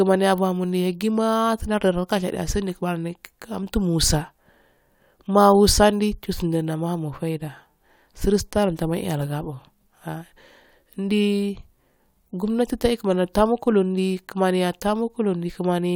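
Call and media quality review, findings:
No faults found in the speech audio.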